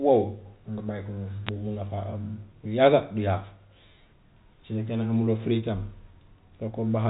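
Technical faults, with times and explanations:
1.47–1.49 s, bit errors on a digital phone line: A brief burst of bit errors breaks through the speech. Scattered flipped bits, at a very low rate, each corrupted a single sample of the G.711 mu-law stream. Hits on sign or high bits make clicks.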